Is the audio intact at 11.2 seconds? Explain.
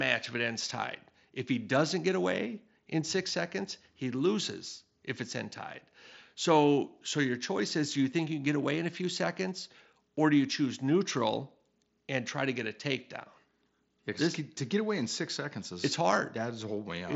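Yes, the audio is intact at 11.2 seconds, with the speech carried through the wideband Bluetooth mSBC headset link as it is elsewhere, its content stopping short of about 7.7 kHz as that codec's bandwidth allows.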